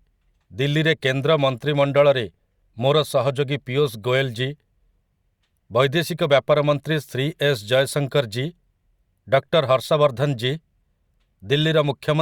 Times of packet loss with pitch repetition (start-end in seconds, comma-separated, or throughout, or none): none